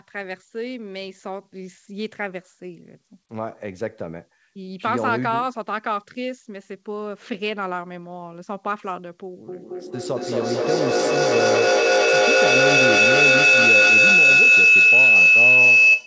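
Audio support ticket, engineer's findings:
Shrill tone near 3 kHz from 9.49 s to end, pulsing about every 200 ms, about 12 dB over speech. Feedback howl: two call devices sharing a room, mic-to-speaker loop gain above unity.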